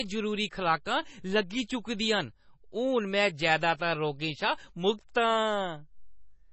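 The speech here carries heavy MP3 compression all the way through: nothing survives above 8 kHz, and the remaining sound has that watery, swirly quality with chirpy s sounds and smeared attacks. It's likely a very low bitrate encode, something around 24 kbps, starving the encoder of bits.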